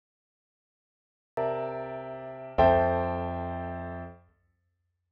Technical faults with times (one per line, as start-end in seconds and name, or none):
0.00-1.37 cut-off start